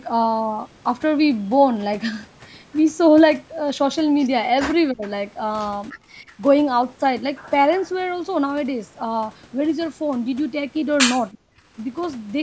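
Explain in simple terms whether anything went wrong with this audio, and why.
The speech briefly drops out three times: around 4.91 to 5.03 s, 6.21 to 6.39 s, and 11.32 to 11.61 s. The first and last are nearly silent, and the middle one is just a noticeable dip. It sounds like speech suppressed in double talk. Both ends of the call were likely talking at once, and the echo canceller, unsure which sound was echo, turned this side down too. The last gap is the longest, close to a third of a second.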